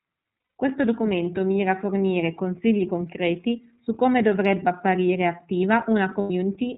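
Throughout, the speech carries plainly audible iLBC codec damage: nothing above 4 kHz, with a rough, slightly synthetic texture, which fits iLBC's 13.33 kbps mode with 30 ms frames, each frame coded independently.

From 0.38 to 0.56 s and again from 6.21 to 6.31 s, lost iLBC frames leave gaps of 180 ms and 90 ms. The decoder fills them by repeating the last pitch cycle with noise, giving a held, buzzy vowel before the speech recovers almost immediately.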